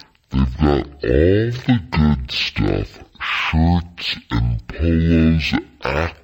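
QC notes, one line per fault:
Throughout: stereo read as mono. The speech drags at half speed and sits an octave low, with a faint mirrored copy in the upper half of the spectrum. Left and right samples are being played one after another as a single channel, doubling the number of samples.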